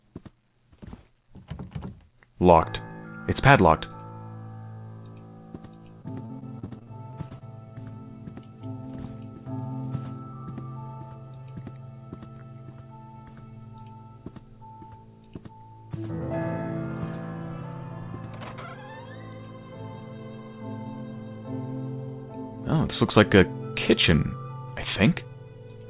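From 6.02 to 7.43 s, repeated packet loss gives a choppy, robotic stretch: about a dozen holes, up to 39 ms each, are patched by stretching earlier sound, unlike a single isolated dropout. The band stops at 4 kHz throughout, which fits a G.711 A-law call path at 64 kbps.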